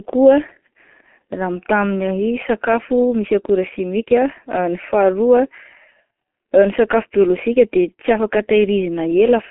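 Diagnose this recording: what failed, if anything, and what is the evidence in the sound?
G.723.1 codec damage, throughout: speech confined to about 200 Hz–3.5 kHz, muffled and hoarse with smeared consonants, consistent with coarse 30 ms frames at around 6 kbit/s.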